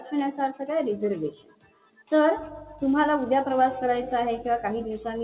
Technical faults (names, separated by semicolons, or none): noise suppressor applied to music or sounds; sound cut by the noise suppressor